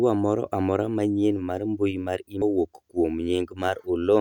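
Right at 2.42 s there's a tiny blip in the speech, the classic sign of damaged data in a compressed stream. Some of the data got mangled, so the decoder garbled that bit of audio, lost its footing and had to hunt for the next clean frame to resync.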